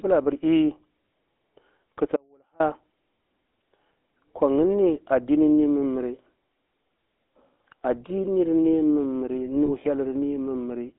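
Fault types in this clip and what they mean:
GSM full-rate codec: The speech is carried by an old mobile-phone vocoder throughout. It sounds buzzy and gravelly, confined to roughly 250 Hz to 3.5 kHz.
Audio dropout to a faint residue: The speech cuts out abruptly from 2.16 to 2.60 s. Only a faint trace about 35 dB down remains, likely a brief signal loss.
Lost GSM frames: At 9.66 s one 20 ms frame is replaced by a repeat of the previous one, giving a brief rough, metallic ring.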